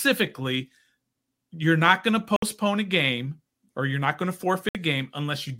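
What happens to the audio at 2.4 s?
From 2.36 to 2.43 s the speech cuts out for about 61 ms, likely a Bluetooth dropout: packets, consistent with three, missed their delivery time and were discarded. The waveform shows a flat gap and the spectrogram a blank vertical band, with speech resuming as though it had continued underneath.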